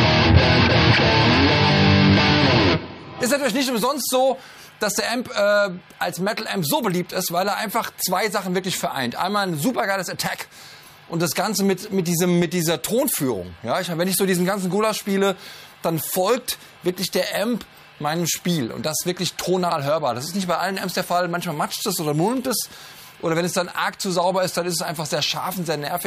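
Nothing is technically wrong with this audio.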